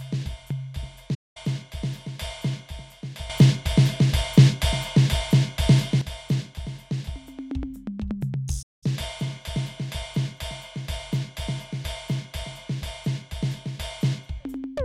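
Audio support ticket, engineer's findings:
Playback stall, 1.14–1.37 s and 8.62–8.84 s: player likely starved of data or thread blocked; music drops to silence for about 0.2 s each time, then resumes.

Sudden gain jump, 3.30–6.01 s: digital gain likely switched without a ramp; music and background noise leap together by about 11 dB.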